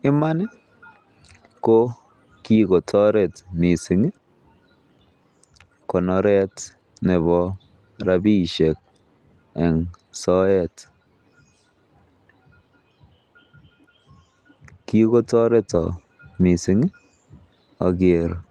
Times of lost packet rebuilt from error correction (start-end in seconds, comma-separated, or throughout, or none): 1.81-1.87, 3.75-3.77, 8.07-8.13, 10.23-10.25, 15.73-15.79